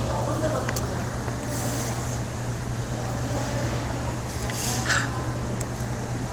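No technical faults are audible anywhere in this audio.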